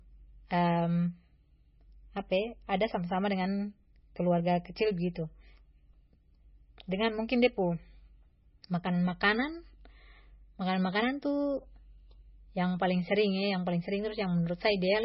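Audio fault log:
Throughout, MP3 compression: heavy damage, nothing above 5.6 kHz, watery swirling texture. Likely a starved bitrate, which fits about 18 kbps.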